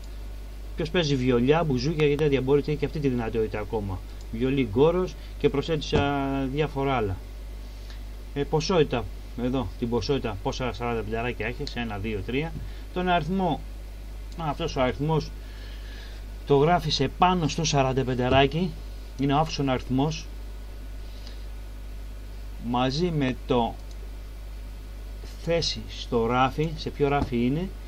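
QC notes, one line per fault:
2.0–2.21 s, loud pop: two sharp pops in quick succession, about 15 dB above the sound, which continues underneath; likely a sudden voltage step or pulse from a plug, switch, static or driver glitch.
23.29–23.31 s, loud pop: a single brief pop, about 10 dB above the sound, likely a voltage spike from a switch, static or driver glitch entering the signal.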